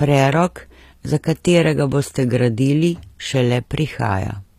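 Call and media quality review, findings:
HE-AAC compression, whole clip: speech treble sounds synthetic, s sounds gritty and lispy, nothing above 14.9 kHz. Likely an HE-AAC encoder, spectral band replication faking the highs from lower bands, damage plainly audible, fits a bitrate around 24 kbps.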